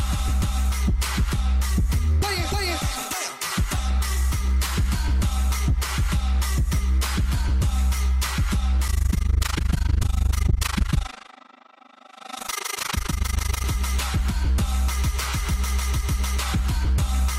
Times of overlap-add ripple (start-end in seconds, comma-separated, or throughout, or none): 8.88-13.66